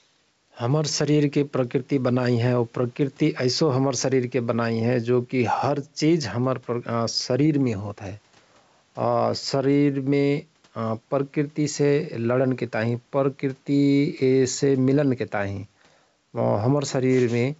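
Right from the start and all the way through, there's gain pumping in this speech. The room noise sits about 44 dB under the talker, and the level moves by around 5 dB. The likely cause is input gain set too high and a fast limiter or compressor clamping down on every loud syllable. That flattens the dynamics, so loud and quiet passages sit closer together and the delivery sounds squashed. The wideband telephone band, consistent with 64 kbit/s G.722, shows at most a faint trace.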